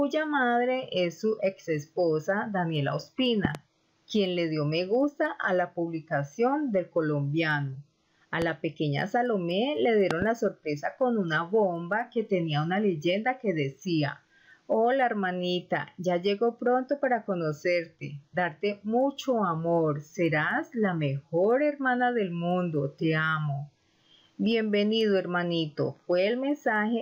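Likely voltage spikes, such as from a switch or static, add loud pops far above the sound: doubled at 3.45–3.57 s and 10.11–10.24 s, single at 8.42–8.44 s.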